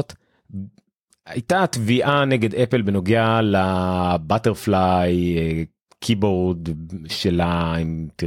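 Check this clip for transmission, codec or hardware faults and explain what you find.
Nothing here stands out as a transmission, codec or hardware problem; it's a speech recording with no faults to report.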